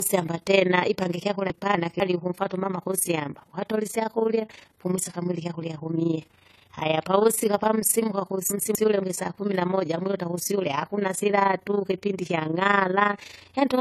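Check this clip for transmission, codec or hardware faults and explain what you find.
Three faults are present: two running through the whole speech clip and one occurring twice.

Low-bitrate audio saved at a high bitrate runs throughout. The speech has a codec-worn texture. This likely comes from a low-bitrate encode later re-saved as a larger MP3, which cannot restore the discarded detail.

Overlap-add ripple is also continuous. Frames were recombined with an overlap that doesn't sum to a steady gain, so the level pulses by about 11 dB around 30 times a second. The result is a rough flutter over the speech.

Chunks out of order occur from 1.50 to 2.00 s, after "tena ipange ikyakurya" and before "ukumfwata umama kusyamba ukatole", and again from 8.50 to 9.00 s, after "pavusika pamsimuka" and before "isaa kumi namoja mwiluta". Each time a 250 ms chunk plays one slot late, so the sound jumbles briefly across the hard joins.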